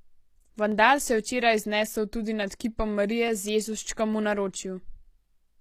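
A speech recording with plainly audible codec damage throughout. The upper frequencies sound bright but false. Sibilants come out gritty and lispy, with a metallic sheen on the treble. This is likely HE-AAC compression at a low bitrate, around 24 kbps. The lower band is coded directly and the treble is rebuilt by copying lower bands upward. So the upper harmonics no longer line up with the real ones. There are also clock drift buffer slips. A short, regular click recurs every 0.85 s, from 0.72 s to 4.99 s, about seven times in all. The steady spacing points to two devices running on separate clocks. The likely cause is a clock error near 200 ppm, so the buffer between them drifts until it drops or repeats a handful of samples.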